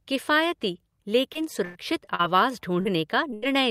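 From 1.33 to 2.21 s the speech turns choppy, with pieces dropping out. This is repeated packet loss: four separate gaps, the longest about 100 ms, were each patched by extending the preceding sound, so roughly a fifth of that stretch is synthetic fill.

At 2.81 s and again at 3.31 s there are brief smears where the speech wobbles for a moment. Both are short concealed packet loss. Around 40 ms and 20 ms of audio never arrived, and the decoder covered each gap by continuing the last sound before blending back in.

Straight after the second one, from 3.34 to 3.44 s, a burst of packet loss drops about 80 ms. The last sound is held as a fading buzz or hiss, then the speech picks up further on with that piece missing.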